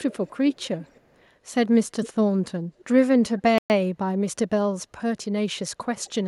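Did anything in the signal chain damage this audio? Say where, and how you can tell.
Yes. Call processing let through an echo leak at 0.11 to 0.37 s, 0.53 to 1.01 s, 2.03 to 2.09 s, 3.38 to 3.42 s and 5.97 to 6.12 s. Each time a faint delayed copy of the speech trails the original by about 255 ms. It sits well below the direct speech, roughly 15 to 40 dB down. The steady delay points to a loudspeaker path on the far end. Its echo canceller likely left residue that was sent back.

A Bluetooth stall hits playback at 3.58 s. The sound drops to silence for 117 ms and resumes at 3.70 s. That fits a wireless link whose buffer ran dry while packets were held up. The likely cause is interference on the headphone link delaying those packets until they were resent.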